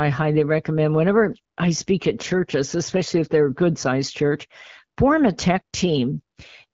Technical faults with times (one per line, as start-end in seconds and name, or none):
none